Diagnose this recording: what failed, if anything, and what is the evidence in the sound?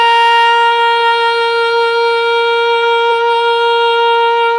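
Nothing in the signal chain has failed: the music arrives intact, with no dropouts, level jumps, distortion or timing disturbances anywhere in the recording.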